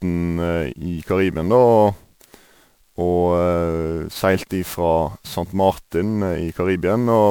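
Speech, with generation loss present from start to finish: the sound is swirly and hollow, sibilants and consonant attacks are smeared, and the high band has a watery, holed texture heavier than a single MP3 pass would leave. The likely cause is repeated decoding and re-encoding, around ten passes, each quantising on a shifted frame grid so the artefacts stack, at a quality that fits a 128 kbit/s MP3 chain.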